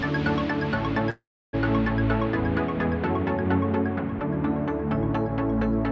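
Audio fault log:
1.10–1.55 s, call audio freeze. The sound stops moving forward and the last moment is held as a buzz that fades, ending in about 0.3 s of near silence. In all, 431 ms of filler is inserted. Nothing is skipped. When the sound resumes, it picks up exactly where it halted, now running 431 ms late. The likely cause is delayed packets leaving the jitter buffer empty, so the receiver stretched the last sound until they arrived.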